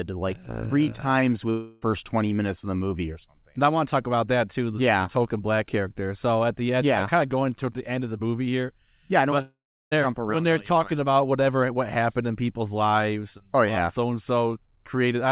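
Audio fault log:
1.50–1.84 s and 9.42–9.93 s, long network dropout: the sound smears into a fading buzz, about 0.32 s at the first point and about 0.5 s at the second, where roughly 0.35 s of silence follows before the audio resumes with that stretch gone. This is likely a run of lost packets that the receiver concealed by extending the last sound. The narrowband G.711 A-law call audio, with nothing above 4 kHz, carries through both gaps.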